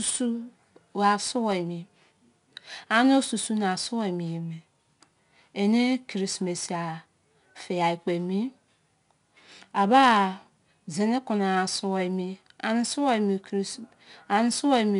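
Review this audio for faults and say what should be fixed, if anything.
The whole speech clip has 4-bit ADPCM compression damage, and it's plainly audible. Each sample is coded as a small 4-bit step from a predicted value, so there's a gritty hiss riding on every loud syllable and some distortion on sharp onsets where the step size can't grow fast enough. There's also nothing above about 10.6 kHz, which points to a low sample rate around 22 kHz. To prevent it, export to a higher-resolution codec such as 16-bit PCM.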